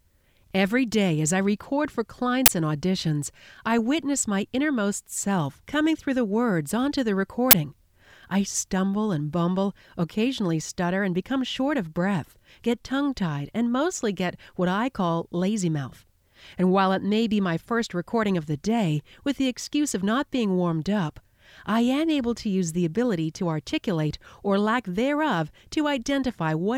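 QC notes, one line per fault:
2.46–2.48 s and 7.51–7.53 s, uninitialised buffer: two 21 ms bursts of loud digital noise where stale memory was played as samples, a length that fits a 1024-sample buffer. The waveform shows hard-edged blocks; the spectrogram shows thin broadband vertical stripes.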